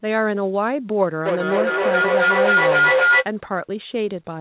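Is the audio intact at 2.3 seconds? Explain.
No. A feedback howl runs from 1.26 to 3.31 s. Each loop trip adds gain, so a tone near 1.5 kHz builds, the loop repeating every 0.3 s, showing as a bright horizontal spectrogram band.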